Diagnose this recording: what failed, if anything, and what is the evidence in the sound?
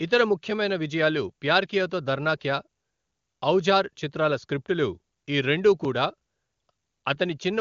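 Nothing in the recording points to a failure at any stage: the speech has the steady wideband character of AMR-WB HD Voice, with its band up to about 7 kHz intact and at most a faint coding texture, which fits the codec running at or near its top rate of 23.85 kbit/s.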